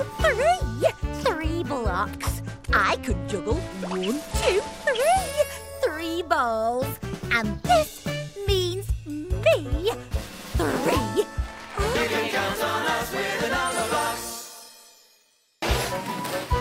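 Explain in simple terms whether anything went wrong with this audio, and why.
A Bluetooth SBC bit pool drop happens from 2.12 to 5.42 s. The wireless link got crowded, so the sending device squeezed the audio into far fewer bits. The highest sounds were dropped and the rest coarsened, leaving a dull, gritty patch until quality returned.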